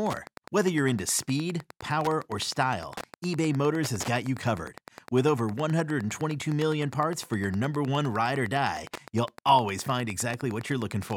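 Speech, with Wi-Fi interference running through the whole clip: a steady ticking at about ten per second, sitting roughly 20 dB below the speech. The 102.4 ms spacing matches a nearby Wi-Fi radio's beacon, which the audio circuitry picks up and rectifies into audible clicks.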